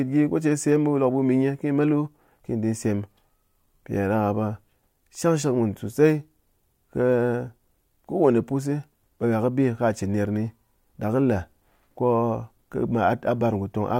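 Nothing stood out as a technical fault on listening through the speech recording.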